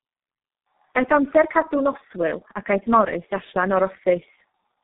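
Tandem speech coding all the way through: the speech is rough, muffled and warbly, with nothing above 3.8 kHz, as if it was squeezed through two low-rate speech codecs back to back.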